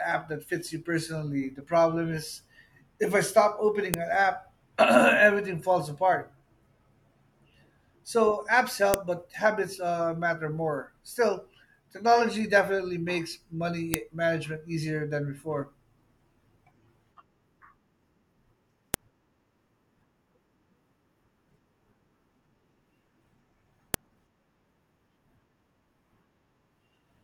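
Sharp, loud clicks cut through the speech at 3.94, 8.94, 13.94, 18.94 and 23.94 s, exactly 5 s apart. This is a file header played as audio: each joined 5 s piece kept its WAV header, and those bytes were decoded as samples, producing a snap regardless of the signal.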